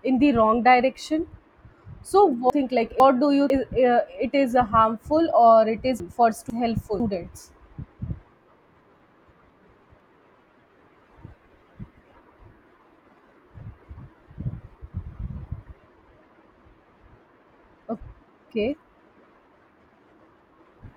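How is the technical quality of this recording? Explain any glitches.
The recording has four glitches, all the same kind: chunks out of order, at 2.5 to 3.5 s, 6.0 to 7.0 s, 9.0 to 10.0 s and 17.5 to 18.5 s. In each spot a half-second chunk of the speech turned up one chunk late, so it plays after the piece that should follow it. Nothing goes missing, but each second-long stretch comes out scrambled, with three hard joins where the swapped pieces butt together.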